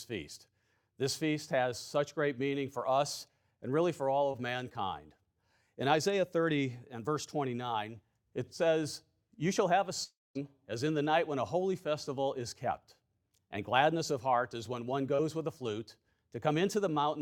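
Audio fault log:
4.31 to 4.36 s and 15.15 to 15.21 s, short concealed packet loss: each is a brief smear or wobble in the sound. About 20 ms of audio is missing at the first and about 40 ms at the second. These gaps are too short to hear as silence. The receiver covered each hole by extending the sound just before it for roughly the same length, then blended back into the real audio.
10.04 to 10.37 s, long network dropout: the sound gives way to a short fading buzz or hiss, then about 220 ms of silence, before it returns with about 320 ms of audio gone. The likely cause is a stretch where nothing arrived from the network. The receiver kept extending the last sound until that faded out, and playback resumed past the lost section rather than replaying it.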